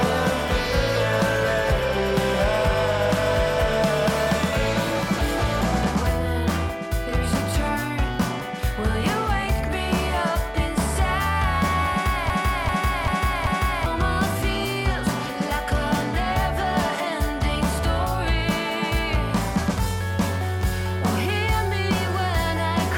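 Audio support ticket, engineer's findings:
Broken-record loop, 12.30 to 13.86 s. One 390 ms fragment repeats exactly, four times back to back. Likely a stalled player, encoder or stream resending its last buffered piece. Audio due in that span is lost.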